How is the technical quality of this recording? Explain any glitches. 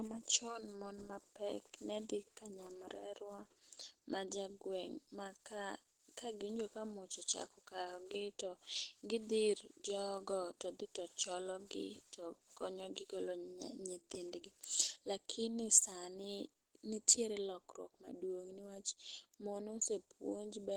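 The recording has audible compression damage from start to finish. The speech sounds plainly muffled and hoarse, with a rough, grainy edge, most likely from Opus compression in its hybrid speech mode at a low rate, around 16 kbps.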